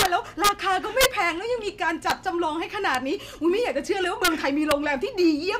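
Integer overflow cracks break through the speech seven times. The first, from 0.00 to 0.06 s, is the harshest, with the level pushed about 6 dB past full scale. Smaller ones follow at 0.44 to 0.49 s, 1.01 to 1.06 s, 2.10 s, 2.95 s, 4.25 to 4.28 s and 4.71 s, each only about 1 to 2 dB over. The loudest peaks exceed the largest integer value. They wrap to the opposite sign instead of being limited. Each jump across the full range sounds like a violent snap, far sharper than clipping.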